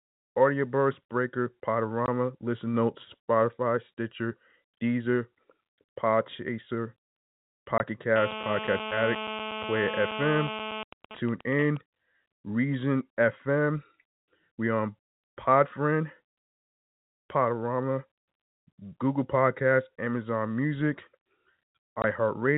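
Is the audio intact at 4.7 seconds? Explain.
Yes, the audio is intact at 4.7 seconds, with only the narrow telephone band of G.711 coding audible there and no fault.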